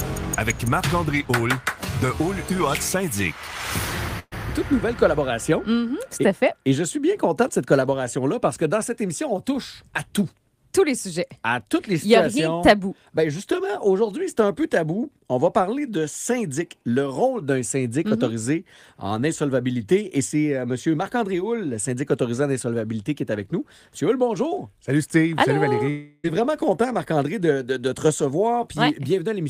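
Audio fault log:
4.19–4.34 s, burst of packet loss. About 120 ms is missing. The last sound is stretched and fades, then 30 ms of silence before audio resumes.
25.90–26.26 s, about 340 ms missing. The last sound is held and fades throughout the gap, then audio resumes further on. Likely a long network dropout.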